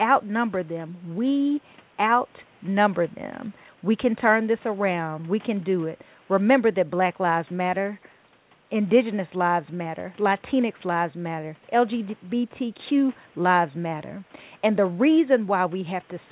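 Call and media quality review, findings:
Nothing to flag here: the speech sits well above a low room noise, about 33 dB down, and the call path's band limit at 4 kHz fits ordinary narrowband G.711-style telephony.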